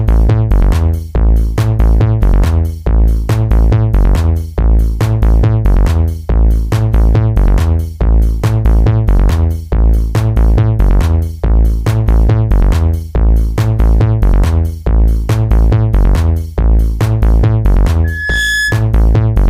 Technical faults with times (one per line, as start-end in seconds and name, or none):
18.04-18.86 loudspeaker feedback squeal